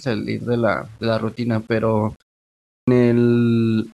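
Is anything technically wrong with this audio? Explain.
Yes, there are two problems.

Throughout the speech, a grainy, gritty distortion rides on the signal and changes with it, roughest on the quietest passages, where low-level detail breaks into a rasping texture. The error sits roughly 40 dB below the speech. The likely cause is low bit depth without dither: samples rounded to a coarse grid, which fits about 8 bits. Because no dither randomises that rounding error, it follows the waveform and is heard as distortion rather than a steady hiss.

At 2.64 s, after a half-second pause, the speech starts abruptly, as if cut in mid-sound. The first 235 ms are missing, and audio returns at about 2.88 s. This is a clipped start after a pause. The output device idles during silence and needs time to wake or relock, so the opening of the next phrase is swallowed before playback resumes.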